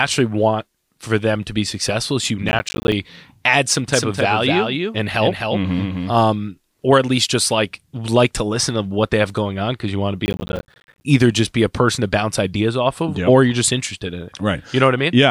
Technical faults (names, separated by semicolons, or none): processor overload crackle; doubled audio track